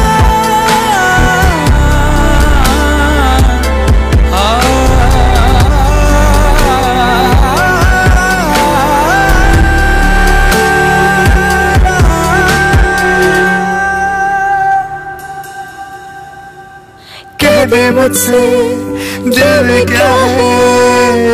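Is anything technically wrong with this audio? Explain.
Yes. Hard clipping runs throughout. The signal is driven about 12 dB beyond what the chain can pass, flattening roughly a seventh of the samples into harsh, fuzzy distortion.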